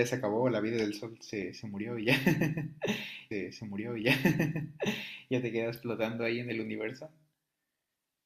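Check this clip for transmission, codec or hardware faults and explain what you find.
One transmission fault is present in the speech: a stream segment repeated. From 3.31 s to 5.29 s, about 1.98 s of audio plays a second time. The player fetched or queued the same chunk twice, so playback jumps back and repeats it, with a small blip at the join. Unlike an echo, the copy is not overlaid on the original, and unlike a rebuffering stall, there is no silence.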